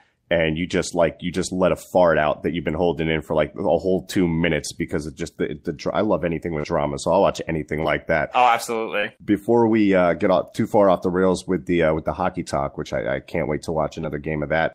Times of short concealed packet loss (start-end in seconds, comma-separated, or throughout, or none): 6.59-6.65, 7.81-7.86, 9.00-9.05, 14.01-14.04